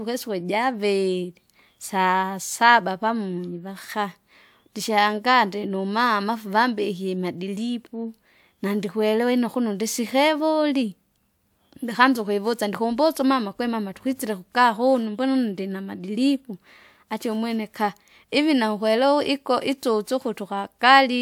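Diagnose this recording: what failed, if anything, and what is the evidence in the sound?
Listening closely to the speech in this recording, nothing stood out as a fault at any stage of the chain.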